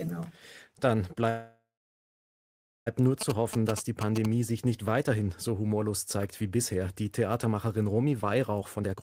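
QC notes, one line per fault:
1.29–2.88 s, call audio freeze: the sound stalls and is carried on as a fading buzz, then about 1.2 s of silence, before resuming right where it left off. Nothing's lost, but a gap of roughly 1.6 s gets inserted, likely from packets held up in transit draining the jitter buffer.
3.21–4.26 s, GSM signalling bursts: a galloping dit-dit-dit of short buzzes at 217 Hz, fairly loud at about 5 dB under the speech, ending just before "sich nicht weiterhin so". That's a nearby 2G phone signalling, its radio bursts rectified by the audio circuit.
8.60–8.99 s, jitter buffer speed-up: the speech suddenly rushes, running at 157% speed with the pitch unchanged, as roughly 200 ms gets trimmed out in small pitch-period slices. The receiver is shrinking an overfull buffer to bring the delay back down.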